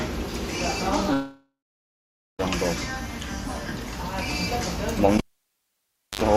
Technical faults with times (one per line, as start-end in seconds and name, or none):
1.13-2.41 long network dropout
5.18-6.21 cable pulled and plugged in